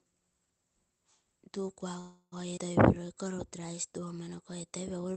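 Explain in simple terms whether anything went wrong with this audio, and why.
Several things went wrong in this speech.

From 1.99 to 2.34 s the sound hangs as a fading buzz, ending in a short silence, then resumes where it stopped. That is a call audio freeze, likely from delayed packets. Nothing is lost, unlike a skip.

At 2.56 s there is a skip ahead: about a tenth of a second is dropped and the two sides join almost directly, so there is no pause, only a jump.

From 2.99 to 4.06 s a jitter buffer slow-down plays the speech at about 93% speed. Sounds are drawn out but the pitch stays the same, unlike a freeze.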